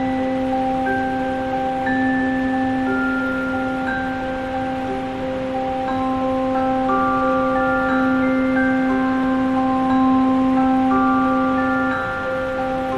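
Nothing in the audio stands out as a technical fault; it runs along steadily without any glitch worth pointing to.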